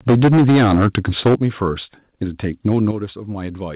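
From 0.08 to 1.35 s the peaks are flattened by microphone overload, a harsh crackle on loud syllables, likely from input gain driving the converter about 12 dB past its limit, clipping roughly a fifth of samples; unlike codec distortion, it tracks loudness. Microphone volume stepped down at 0.1 s (about 2 dB), 1.35 s (about 9 dB) and 2.91 s (about 6 dB). Voice and background drop together in one instant step, not a gradual fade, likely from the call software cutting device gain after clipping. All of this sits within a telephone-band signal with nothing above 4 kHz.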